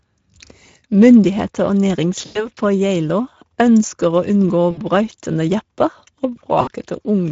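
Throughout, the speech carries Speex codec damage that is plainly audible: a hoarse, noisy texture from the coarse excitation coding, which fits a mid-quality setting near 16.8 kbps. On a spectrogram, harmonics look smeared and grainy rather than cleanly striped.

At 2.25 to 2.49 s, then 4.71 to 4.81 s and 6.61 to 6.70 s, VoIP packet loss concealed by the speech codec stretches the last sound into a buzzy tone or coloured noise that fades. The first gap is about 100 ms, the others 60 ms. Waveforms show the level decaying during each gap.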